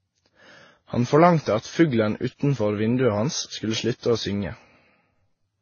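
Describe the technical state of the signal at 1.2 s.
At 1.2 s the speech shows the same layered coding damage present through the whole clip: nothing above about 6.9 kHz, with the different codecs' artefacts heard together, stacked on each other. This is likely transcoding between lossy codecs, where each later encoder re-spends bits on earlier artefacts while the lowest cut-off persists.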